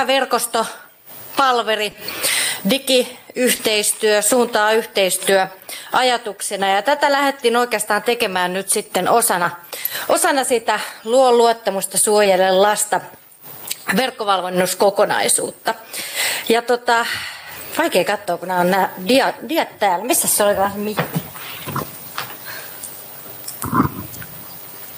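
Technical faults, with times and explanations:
1.91–1.95 s, 3.55–3.61 s and 12.23–12.27 s, short concealed packet loss: small gaps of 20, 40 and 20 ms never arrived in time, so the receiver stretched the preceding sound across each hole and faded back in. You hear a quick smear or wobble.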